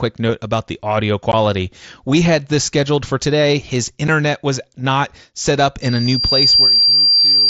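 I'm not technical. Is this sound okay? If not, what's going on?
No. There are two problems.

The first is unconcealed Bluetooth headset packet loss. The headset sends sound to the phone in tiny chunks, and a few of them never arrived and were replaced with silence or a filler pattern. You can hear two brief, clipped gaps. One is at about 1.32 s, just after "note about the audio", lasting 15 ms. The other is at about 4.08 s, just before "was not set up", lasting 7.5 ms.

The second is a loudspeaker feedback squeal. The microphone is picking up a nearby loudspeaker that is playing its own signal, and that loop keeps amplifying one pitch. Starting at 5.82 s, right after "was not set up", a high whistle at 4.7 kHz swells over about a second until it sits slightly louder than the speech. It continues to the end of the clip. The headset's mSBC connection is also audible as a faint graininess on louder sounds.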